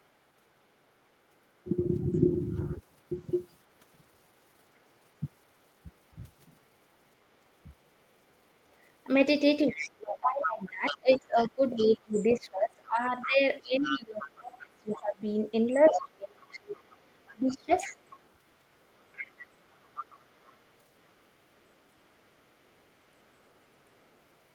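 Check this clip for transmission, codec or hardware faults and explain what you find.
Two echo-control faults are audible in this speech clip, both pointing to an echo canceller struggling with loudspeaker playback on the talker's side.

Other side's voice leaking through occurs at 2.14–2.18, 9.68–10.17, 10.86–14.28, 14.93–15.0, 15.7–18.3 and 18.83–24.23 s. A second voice sits under the talker, from very faint (about −40 dB) to fairly prominent (about −10 dB around 10–14 s). The likely cause is residual loudspeaker echo the canceller failed to subtract. On a spectrogram it shows as extra harmonic striations that don't follow the main talker's pitch. In the waveform it appears as low-level activity in what should be gaps.

Speech suppressed in double talk occurs briefly at 6.15–6.21 s, a shallow dip of roughly 10 dB. A much longer stretch runs from 9.73 to 17.9 s, where about five seconds in total are pushed down by up to roughly 25 dB. 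The talker's voice dips and drops out in pieces. This is likely the suppressor attenuating everything when both sides overlap. The waveform shows chopped, sagging envelopes, and the spectrogram shows the upper bands fading or gating off.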